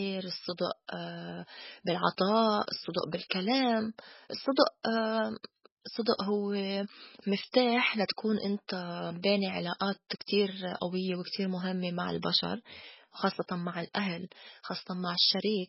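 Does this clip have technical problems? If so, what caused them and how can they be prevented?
Yes. For the whole clip the speech sounds watery and swirly, with nothing at all above about 5.5 kHz, so the top of the s sounds and breaths is simply gone. That's most likely heavy MP3 compression at a very low bitrate, something around 16 kbps. Starved of bits, the encoder chops the treble at a fixed cutoff and drops quieter frequency detail that flickers in and out between frames. To prevent it, keep a lossless or high-bitrate master and encode MP3 at 128 kbps or more.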